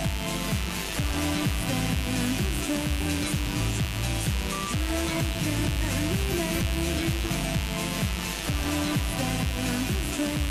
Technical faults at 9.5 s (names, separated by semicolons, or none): mains buzz